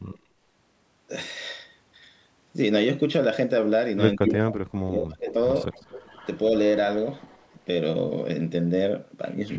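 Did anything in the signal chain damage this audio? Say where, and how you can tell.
Yes, in the call processing. There's echo leak: a delayed copy of the speech at 0.05–0.18, 4.26–4.32, 5.72–6.27, 7.19–7.54 and 9.49 s to the end, trailing by 175 to 224 ms. It ranges from faint, around 35 dB down, to roughly as loud as the speech. That's likely a far-end echo canceller letting loudspeaker pickup through.

There's also speech suppressed in double talk between 4.17 and 5.35 s. For about a second in total the voice dips, at worst by around 30 dB, while the loud echo burst overlaps it. That's likely the canceller failing to separate talker from echo and ducking both.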